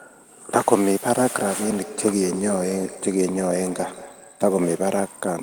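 A speech clip with feedback echo between two devices from 1.3 s to 5.04 s. Each word returns at a fixed delay of roughly a fifth of a second. At its loudest, the echo sits about 13 dB below the speech. Two devices in the same room are on one call. One plays back what the other's microphone sent, and that microphone picks it up again. Each device's echo canceller removes only its own playback, so this loop gets through.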